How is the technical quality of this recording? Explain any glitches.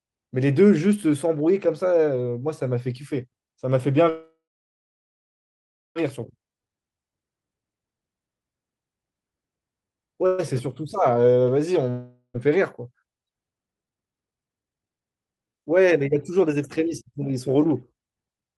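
The recording has clear network-related faults: two freezes, a slow-down, a dropout and two speed-ups.

Call audio freeze, 4.09 to 5.97 s and 10.26 to 10.40 s: packets were likely delayed and the jitter buffer emptied. The sound trails into a fading buzz, then about 1.55 s of silence the first time and a 0.12 s stall the second. Nothing is lost; playback resumes where it stopped.

Jitter buffer slow-down, 6.51 to 6.69 s: repeated pitch periods added 36 ms. The audio plays at 84% speed with unchanged pitch, sounding drawn out.

Long network dropout, 11.90 to 12.36 s: audio likely stopped arriving, and about 0.48 s was never played. The gap is a fading buzz ending in brief silence.

Jitter buffer speed-up, 12.38 to 13.05 s and 13.50 to 17.67 s: the receiver removed short pitch-period chunks to cut excess delay. The first stretch runs at 107% speed, losing about 50 ms. The second runs at 145% speed, losing about 2 s, and sounds noticeably hurried at the same pitch.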